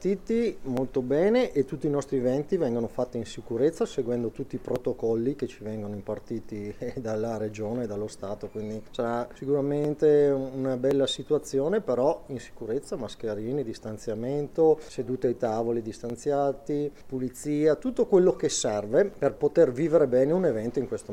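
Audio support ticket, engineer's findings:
Six isolated sharp clicks at 0.77, 4.76, 9.85, 10.91, 16.10 and 19.13 s. Likely dropped samples: under a millisecond of samples missing each time, so the waveform jumps straight to a later value. Too short to lose any sound, just a thin full-band tick. Worth checking the capture or transport buffer handling.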